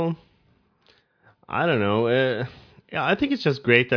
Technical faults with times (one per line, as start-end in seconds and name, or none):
none